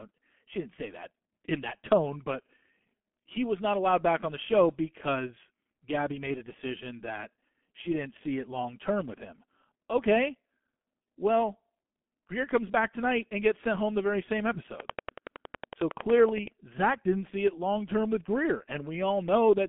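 Speech heard through the G.723.1 codec for its whole length sounds muffled and hoarse, with smeared consonants. The sound fits a very low bitrate near 6.3 kbit/s and coarse 30 ms frames. The band runs roughly from 200 Hz to 3.4 kHz, and a spectrogram shows a hard empty ceiling above 3.6 kHz. From 14.80 to 16.48 s a train of clicks ticks at a regular 10.8 per second, about twenty in all, rising around 15 dB above the signal. Interference from nearby equipment is the likely cause. In the waveform these show as evenly spaced, similarly shaped spikes, and on a spectrogram as thin vertical lines.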